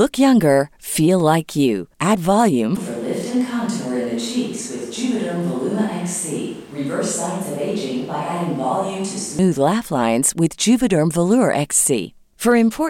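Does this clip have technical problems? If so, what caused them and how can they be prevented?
Yes. From 2.77 s to 9.39 s the speech turns abruptly hollow and roomy, thinner in the bass and about 5 dB quieter, with background noise rising to roughly 25 dB below the speech. The hollow sound begins suddenly just before "laugh lines with". This is likely a switch to a distant microphone after the close one dropped out. The instant change at both edges, rather than a gradual drift, separates it from a talker moving away from the microphone. Monitoring the close microphone's feed and securing its connection would prevent this.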